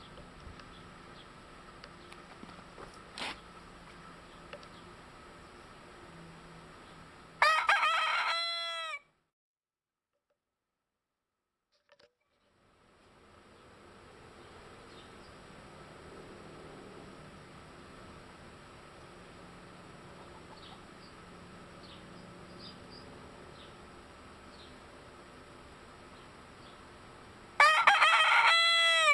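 A resampler restarted on every block runs from start to finish, with the conversion, which points to 48 kHz down to 24 kHz, handled in separate 10 ms chunks. Because each chunk was converted with no memory of its neighbours, the filter saw silence or the wrong samples at every edge and left a small error there. Those errors repeat at 100 Hz, so they fuse into a low buzz riding under the sound, present whenever there is signal and gone in the silences.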